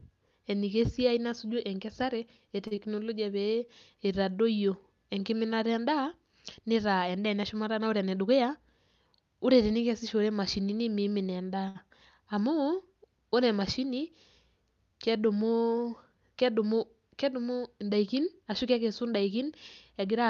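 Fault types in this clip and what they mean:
Short stall from a late packet: the last sound is held while a late packet arrives, at 2.67–2.86 s and 11.68–11.77 s, as repeated, smeared harmonics on the spectrogram.
Short concealed packet loss: about 20 ms is missing at 2.75–2.79 s, patched with extended sound, so a brief smeared or blurred patch appears in the waveform.
Jitter buffer speed-up: pitch periods are cut to shed delay, at 113% for 7.99–8.22 s and 110% for 17.86–18.42 s. Harmonics keep their spacing while events crowd together.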